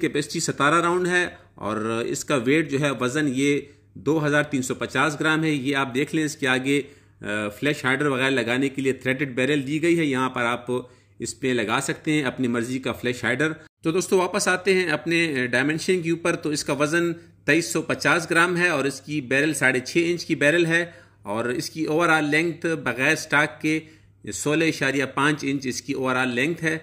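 No dropouts, clicks, distortion or timing problems turn up anywhere across the recording.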